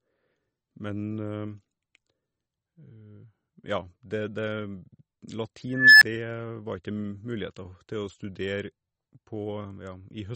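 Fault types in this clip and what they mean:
MP3 compression: Throughout the clip the speech has plainly audible watery, swirling artefacts and smeared attacks, likely from MP3 encoding at a low bitrate, which fits about 32 kbps. Weak frequency lines are zeroed and switch on and off between frames.
Unstable filter: From 5.70 to 6.02 s a tone at roughly 1.5 kHz swells over about 315 ms. A recursive filter with bad coefficients lets its output grow without limit until the numbers overflow. A gap of about 1.5 ms follows while the filter resets.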